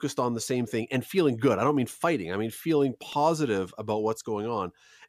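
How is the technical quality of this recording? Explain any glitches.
There is one glitch in this speech recording. An electrical switching spike occurs at 3.12 s, right after "fighting I mean feeling". It is a sharp snap at a modest level, somewhere around -30 dBFS, laid over the speech. It is likely an arc from a nearby switch or motor that was picked up by the audio line.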